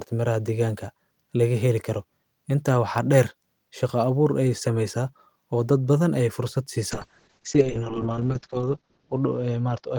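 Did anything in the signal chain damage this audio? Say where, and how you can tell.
Yes. At the codec stage, from 6.93 s to the end, a call bitrate drop makes the speech rough and muffled. Bandwidth narrows from 20 kHz to 8 kHz, and the worst stretch lasts 1.67 s, which fits Opus being pushed from about 32 to 7 kbps.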